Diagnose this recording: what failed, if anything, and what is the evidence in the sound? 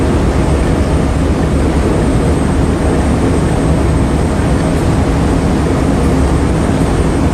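Nothing in the recording points to a failure at any stage of the chain. The audio runs without any audible break, distortion or other defect that would call for a diagnosis.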